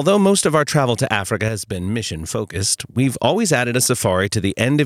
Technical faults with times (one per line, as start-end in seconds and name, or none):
1.49-2.55 sudden gain jump